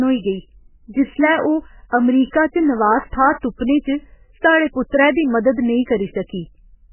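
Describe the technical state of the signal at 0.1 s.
Likely MP3 compression at a very low rate, which fits a bitrate of around 8 kbps, runs through the whole speech clip, including 0.1 s. The encoder cuts everything above 3 kHz and drops weak frequency lines frame to frame, leaving heavy, watery, swirly damage and smeared attacks.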